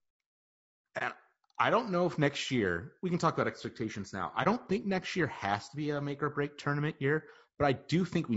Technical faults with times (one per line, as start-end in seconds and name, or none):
0.00-8.37 low-delay AAC compression
0.98-1.02 AAC frame loss with muting
4.43-4.47 AAC frame loss with muting